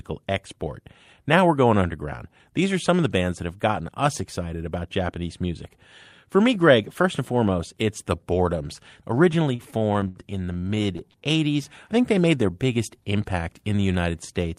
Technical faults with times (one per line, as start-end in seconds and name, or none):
9.55-11.24 repeated stalls (stutter)